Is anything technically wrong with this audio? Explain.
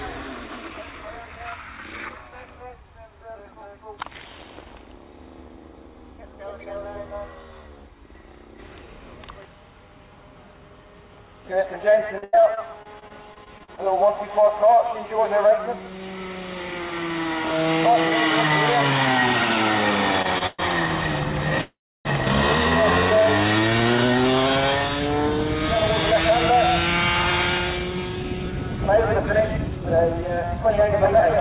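Yes, there are four faults.

Repeated packet loss (robotic sound), 12.18 to 13.79 s: thirteen lost stretches, the longest 88 ms, are patched by extending prior audio. This gives choppy sound with about 300 ms missing.

Repeated stalls (stutter), 20.22 to 20.63 s: packets arrived late four times, so playback paused and repeated itself, up to 119 ms each. The audio drags and stutters but loses nothing.

Call audio freeze, 21.61 to 22.07 s: the audio halts for about 0.44 s, mostly silence lasting 310 ms, then resumes where it stopped. The likely cause is packets delayed in transit emptying the jitter buffer.

Jitter buffer speed-up, 27.79 to 31.16 s: the receiver trimmed about a third of a second of backlog by cutting tiny pitch-period slices. This runs the audio 8% faster at unchanged pitch, so it sounds hurried.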